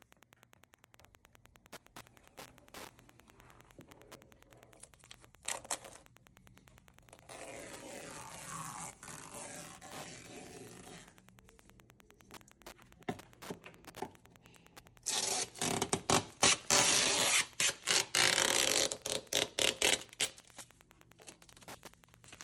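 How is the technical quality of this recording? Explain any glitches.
A steady, faint ticking runs under the whole recording, about ten clicks a second and sitting roughly 25 dB below the programme. This is Wi-Fi interference. A Wi-Fi radio close to the recording chain transmits a beacon every 102.4 ms. Some part of the audio circuit picks up those radio pulses and rectifies them into audible clicks, so the ticks arrive at exactly that even spacing from start to finish.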